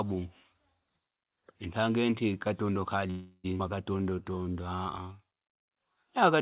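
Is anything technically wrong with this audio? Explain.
Yes, three faults disturb the speech between about 3.1 and 5.6 s. The call-path limit is audible as nothing above 4 kHz, which fits a G.711 mu-law codec.

Call audio freeze, 3.10 to 3.46 s, right after "ntange inti katondo": held-up packets likely emptied the jitter buffer. The last sound continues as a fading buzz or hiss for 338 ms, shown as smeared, decaying horizontal bands with no gap to silence.

Skip ahead, at 3.58 s: roughly a fifth of a second of speech is dropped and the two sides are spliced within 15 ms. This leaves an abrupt waveform discontinuity and a sudden spectral change.

Jitter buffer slow-down, 3.98 to 5.59 s: repeated pitch periods stretch the speech to 87% speed, adding 213 ms at unchanged pitch. Spectrogram harmonics look elongated and the sound is drawn out.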